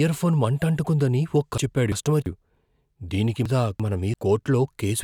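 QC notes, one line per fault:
1.58–2.26 s, frames out of order, just after "మంటంటుకుందని ఓ": two adjacent blocks of about 341 ms each, consistent with four frames per block, swap places and decode in that order. The speech plays with its halves exchanged, giving a garbled flutter. No time is lost.
3.46–4.14 s, frames out of order: the same exchange of two neighbouring blocks of about 341 ms each, again pointing to four frames per block. The two halves sound back to front, with a fluttering jumble. Duration is unchanged.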